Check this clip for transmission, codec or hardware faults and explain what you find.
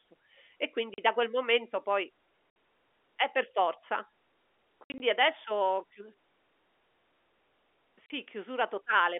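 The clip has one kind of fault, packet loss filled with silence, heard over a narrow telephone-band G.711 line. Dropouts occur at 0.94–0.98 s (just before "da quel momento poi"), 2.5–2.56 s (just after "da quel momento poi"), 4.84–5.0 s (several gaps totalling 100 ms, longest 60 ms, just before "adesso ho") and 8.06–8.1 s. Missing packets were replaced with digital silence, so the speech is cut by hard-edged holes. Gap lengths of 40 and 60 ms suggest 20 ms packets.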